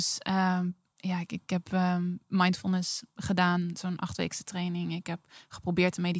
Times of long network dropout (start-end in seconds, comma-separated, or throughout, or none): none